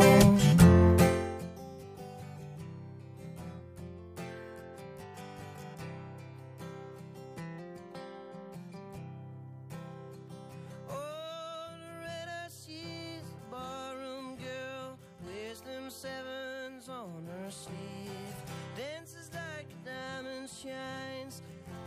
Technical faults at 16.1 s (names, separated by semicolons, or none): none